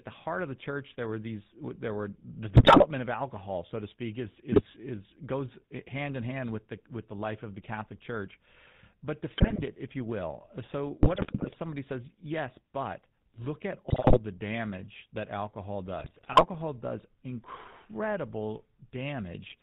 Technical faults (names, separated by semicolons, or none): GSM full-rate codec; GSM bit errors